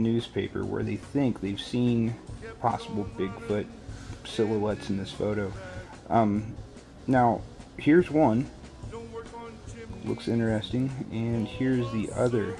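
From 8.3 s onward, a resampler restarted on every block leaves an edge error each 100 ms: 10 Hz ticks, thin vertical spectrogram lines.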